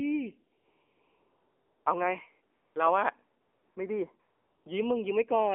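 Throughout, the speech carries AMR narrowband mobile codec damage. Content is confined to roughly 300 Hz to 3.4 kHz, and the coarse vocal-tract model makes the voice plainly buzzy and synthetic, which fits the low 7.4 kbps mode.

AMR comfort noise replaces the real background during the pauses at 0.58–1.86 s (1.28 s), 2.56–2.76 s (200 ms), 3.42–3.76 s (340 ms) and 4.20–4.66 s (460 ms). With no speech frames sent, the receiver fills each gap with smooth, steady synthetic noise that switches in and out at the boundaries.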